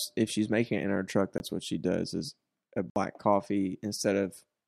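A block of digital silence cuts into the speech twice, from 1.38 to 1.40 s (20 ms) and from 2.90 to 2.96 s (60 ms). In each, a run of samples has been replaced by zeros, so the signal drops straight to nothing and returns with no fade. The 20 ms dropout is heard as a very brief hole, and the 60 ms one as a short, audible hole.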